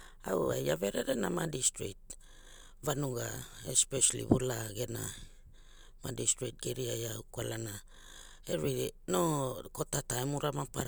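No technical faults can be heard anywhere in the speech. Nothing stands out at any point in the clip.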